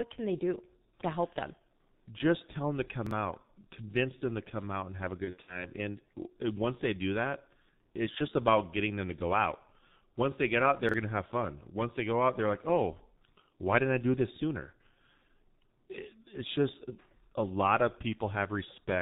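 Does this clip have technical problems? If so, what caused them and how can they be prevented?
Yes. The whole clip passes through the G.723.1 codec at about 6.3 kbit/s. Nothing above 4 kHz survives, so speech sounds muffled and hoarse, with smeared consonants. Prevent this by using a wideband codec at a higher bitrate.

Chunks out of order occur at 3.07 to 3.11 s, after "tell them to" and before "out convince them to". They recur at 10.89 to 10.94 s, after "they get out" and before "going to have fun". Each time, a chunk of about 23 ms plays one chunk late. The hard joins make a brief jumble. Prevent this with correctly sequenced buffer writes and a jitter buffer that reorders by timestamp.

VoIP packet loss concealed by the speech codec runs from 5.25 to 5.68 s, just after "out and have a". About 120 ms went missing across 240 ms, with the longest gap 60 ms. The decoder extrapolated, producing a fading buzzy tone or coloured noise, and the speech stays weak until it recovers. 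Prevent this with forward error correction or redundant packets on a less lossy network path.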